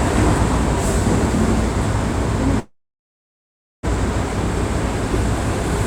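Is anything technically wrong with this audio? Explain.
Yes, this recording of everyday sounds has two timing faults.

From 2.59 to 3.85 s there is a call audio freeze. The sound carries on briefly as a fading continuation of what came before, then goes silent for about 1.1 s of the 1.24 s hold. The likely cause is packets held up in transit, so the jitter buffer ran empty. When playback returns it picks up exactly where it stopped. What sets this apart from a skip is that a gap has been added and nothing is lost.

At 4.29 s there is a skip ahead. Roughly 0.7 s of audio is dropped, either in transit or discarded by an overflowing jitter buffer while later audio was already queued. The sound before and after the jump is joined almost directly, with only a few milliseconds of fill. Unlike the freeze, there is no pause at all. Instead the sound lurches forward abruptly, and material that should have been heard is simply missing.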